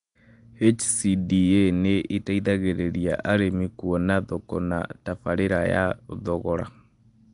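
From start to finish the speech carries a rough, hissy halo and a smeared, underwater quality, with nothing above 10.6 kHz. The likely cause is Nellymoser compression, whose fixed bit budget leaves weak bands empty and fills them with noise.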